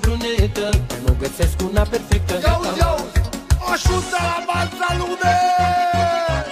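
Nothing is technically wrong with the audio in this clip.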